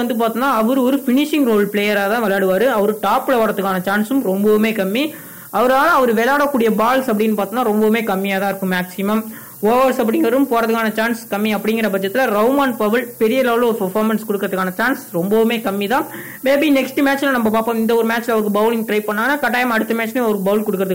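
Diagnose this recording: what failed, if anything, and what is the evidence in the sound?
Low bit depth with noise shaping runs through the whole recording, from start to finish, so the failure sits at the sample-format conversion stage. A steady, thin hiss sits only about 15 dB below the sound and climbs sharply toward the top of the band. The signal has been requantised to just 6 bits, and the rounding error is fed back so that its noise is pushed upward in frequency, leaving that bright, constant hiss.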